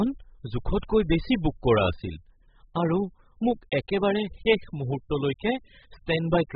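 Speech with heavy codec damage throughout, likely from AAC compression. Nothing survives above 5 kHz and the sound is dull and smeared, which fits AAC-LC at about 8 kbps. A plain low-pass filter would only remove the top; here the remaining detail is smeared too.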